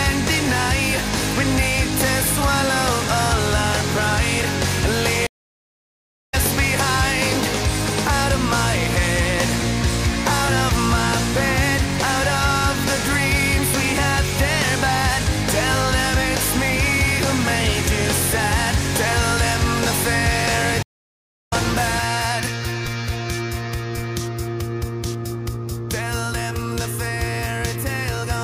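At 5.27 s and again at 20.83 s there's a stream reconnect: the connection drops, leaving gaps of 1.06 s and 0.69 s, then the audio picks up roughly 0.7 s further along.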